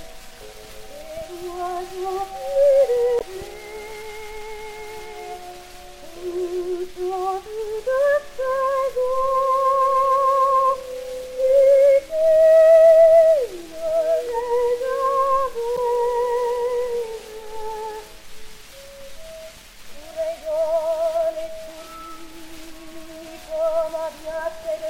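Two short blips, at 3.18 to 3.22 s and 15.74 to 15.79 s, each about 45 ms, break into the audio. These come from damaged data in a compressed stream: corrupted bytes made the decoder misread frames and lose sync until it found the next valid header.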